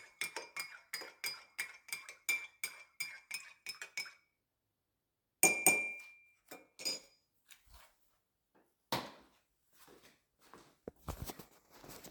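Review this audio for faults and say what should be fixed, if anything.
From 3.34 to 4.69 s the sound jumps about 6% fast and a semitone sharp, then snaps back. From 7.52 to 8.62 s it drops about 6% slow and a semitone flat. These are drift correction steps, likely a clock-matching resampler changing playback rate in one jump to drain and then refill its buffer. The fix is to make the drift corrector adjust the rate continuously in tiny increments rather than in abrupt steps.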